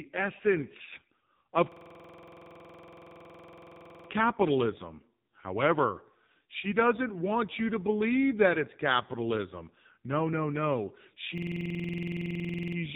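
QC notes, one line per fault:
Throughout: AMR narrowband mobile codec. The speech has been through AMR-NB at what sounds like its 5.9 kbps mode, and the damage is heavy. Nothing above 3.8 kHz survives, so sibilants and consonant edges are dull and muffled. At this bit rate the vocal-tract model gets only a few pulses per subframe to excite it, which leaves the voice buzzy and synthetic, with a coarse, processed texture over every syllable.
1.72–4.09 s and 11.38–12.77 s: system hang loop. In the first, right after "essence of", a 46.44 ms piece of audio repeats 51 times. In the second, after "no no", the same length repeats 30 times before "using it to fund" resumes. Both lock up the same way, with the system frozen while the hardware keeps replaying one ring buffer, which fits a 2048-sample buffer. The piece repeats at a rate of 21.5 Hz.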